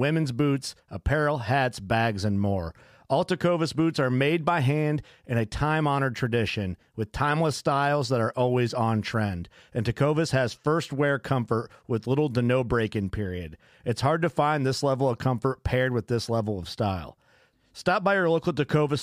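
No technical faults can be heard at any point in the recording.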